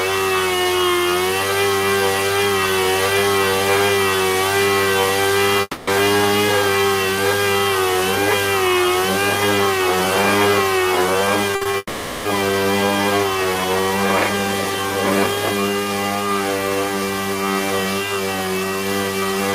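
A long network dropout, likely an interruption in packet delivery, cuts the audio from 5.61 to 5.89 s. The receiver stretches the last sound into a fading buzz for about 260 ms before a brief silence, and the audio resumes with that stretch lost. Repeated packet loss then strikes from 11.51 to 11.75 s. Four short gaps, the longest 60 ms, are patched by repeating sound, giving a choppy, robotic texture with half the span concealed. A second dropout follows at 11.77 to 12.27 s, with about 480 ms of fading fill before the audio returns.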